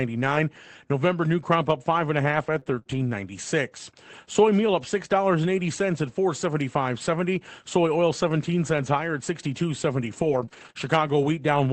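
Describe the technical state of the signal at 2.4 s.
Choppy, robotic speech runs from 2.27 to 3.05 s, just after "up five and a", with small pieces missing. This is repeated packet loss (robotic sound): several packets arrived late or not at all, and each hole, the longest about 21 ms, was patched by stretching the previous sound. About 80 ms went missing in total, and the smeared, rebuilt stretches add up to roughly a third of a second.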